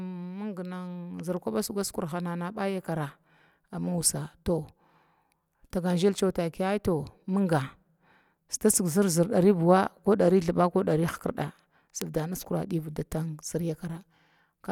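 At 1.81 s, just after "kuba sigu", and again at 12.02 s, the speech carries a bit error spike: a flipped bit throws two consecutive samples off by a power of two before they snap back. Each is a single sharp, broadband tick with no relation to the surrounding sound. Unlike a dropout or edit click, nothing is missing or shifted afterwards; the waveform resumes exactly where it should.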